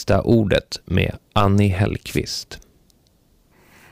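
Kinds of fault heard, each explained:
Wireless microphone noise hit: a brief fade in the analogue FM radio link, where reflected signals cancel and receiver noise surges over the speech, heard as a swish of static from 2.07 to 2.18 s; a spectrogram shows a broadband noise smear, the waveform a short ragged burst.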